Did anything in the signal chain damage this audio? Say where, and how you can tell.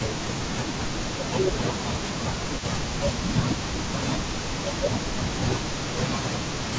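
Yes, the damage sits in call processing. Speech suppressed in double talk shows up as the talker dipping by up to roughly 15 dB, with lost brightness or broken fragments, across 0.0–0.83 s, 1.05–2.28 s, 2.44–2.89 s and 3.25–6.37 s. The longest run is in the last stretch. The likely cause is an echo canceller that, with both ends talking, couldn't separate near-end speech from loudspeaker echo and attenuated everything.

An echo leak runs almost the whole clip, from 0.0 to 1.34 s and again from 1.53 s to the end. It is a faint delayed copy of the speech trailing by 268 ms at roughly 20 dB below the direct signal. A loudspeaker at the far end was likely feeding its own microphone, and that side's canceller left residual echo that was transmitted back. The band stopping at 8 kHz reflects the call's normal microphone processing.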